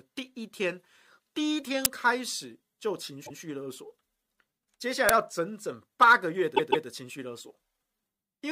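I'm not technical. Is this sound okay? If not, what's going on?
No. Two separate problems are audible in this speech recording.

At 1.85 s and again at 5.09 s there is a sharp, harsh blast of digital noise lasting only about a hundredth of a second. This is an uninitialised buffer: the playback system grabbed a chunk of memory before any sound had been written into it, so whatever leftover data sat there was played as if it were audio. Each burst is raw noise, not any part of the speech, which sets it apart from the second problem.

The second problem is repeated frames, heard as stutters. From 3.25 s a slice of speech about 0.13 s long plays one extra time, which fits roughly five compressed frames being sent twice. From 6.55 s a slice of about 0.16 s plays two extra times, adding about 0.31 s. Unlike the noise bursts, what you hear is the real speech, jumping back and repeating.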